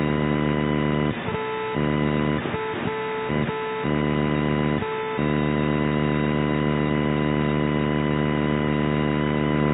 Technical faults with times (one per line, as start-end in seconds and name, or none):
none